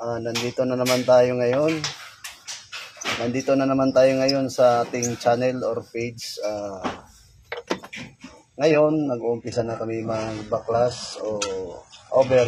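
At 8.71 s an adaptive stream switches to a lower bitrate and stays there until the clip ends at 12.47 s. The sound changes abruptly with no gap, and nothing above 11.1 kHz survives. The top end turns thin and synthetic, pointing to a drop to a very low-rate HE-AAC version.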